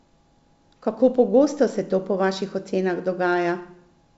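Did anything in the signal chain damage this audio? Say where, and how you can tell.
No, nothing damaged it.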